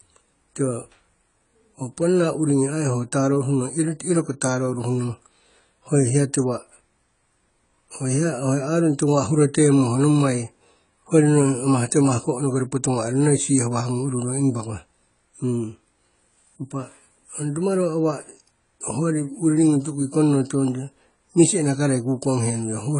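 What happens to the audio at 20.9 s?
At 20.9 s the speech carries the same AAC compression damage heard throughout the clip. Nothing reaches above 10 kHz, so it sounds dull. Sibilants turn smeared and fizzy. This points to a low-bitrate encode, around 24 kbps, likely AAC-LC discarding spectral detail.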